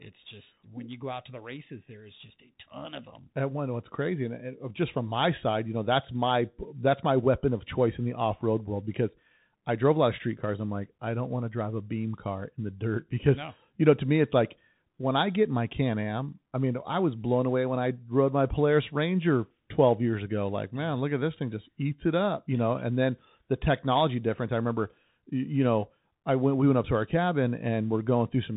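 Throughout, the speech carries the Bluetooth CVSD headset codec. Nothing passes above 3.8 kHz. Sibilants turn scratchy, loud peaks distort, and granular hiss sits underneath, fitting a 64 kbps link.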